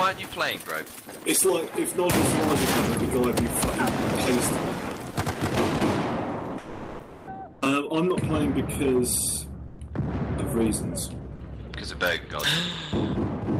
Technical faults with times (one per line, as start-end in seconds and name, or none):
6.61-7.27 sound dropped by the voice detector
9.67-9.79 sound dropped by the voice detector